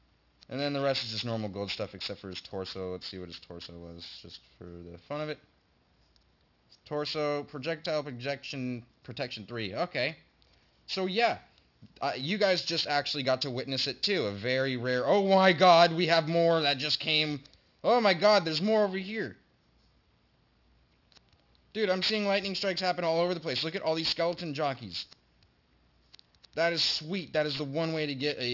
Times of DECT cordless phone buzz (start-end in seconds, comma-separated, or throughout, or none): none